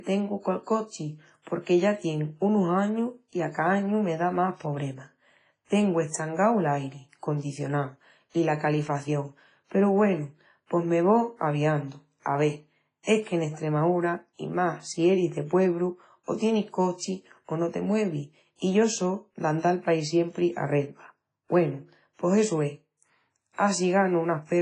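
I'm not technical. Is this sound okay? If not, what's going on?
No. Throughout the speech there is WMA compression damage, likely from squeezing the file hard with Windows Media Audio. Everything above about 10.4 kHz is gone, so it sounds dull, and faint details turn into a washy, ringing hiss that swells and fades with the voice.

Pre-echo appears at 5.65 s, right after "me da más pobremas", at 12.20 s after "pos me vó aviandu", at 13.03 s just before "es que en", and at 23.53 s. The same compression smears its hiss backwards by about 45 to 60 milliseconds, so a short rush sounds just before each sharp sound and blurs its start.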